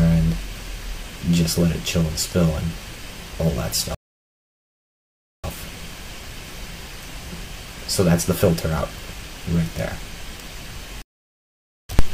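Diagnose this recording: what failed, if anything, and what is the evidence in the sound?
The sound cuts out mid-flow into silence twice: from 3.95 to 5.44 s, about 1.5 s, and from 11.02 to 11.89 s, about 0.87 s. This is a playback stall, likely from the player's buffer running dry or its output thread being blocked until it recovered.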